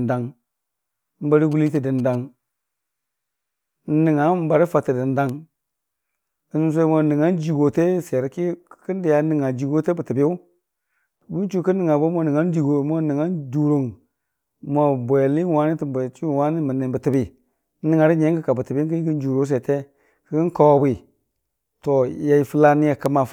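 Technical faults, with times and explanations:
1.52 to 2.15 s, GSM signalling bursts: a quick galloping run of ticks and short buzzes at about 217 Hz, sitting roughly 25 dB under the speech. A nearby 2G phone was likely just signalling to the network, and the audio circuitry rectified its radio bursts into audible clicks.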